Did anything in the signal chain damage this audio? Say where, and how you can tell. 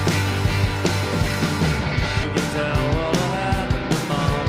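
Yes. At 2.23 s the sound jumps abruptly forward with no gap, joining two points that don't belong together. Roughly 0.7 s of audio is missing. This is a network-stage skip ahead: a stretch was dropped while later audio was already queued, either in transit or by the jitter buffer after overflowing.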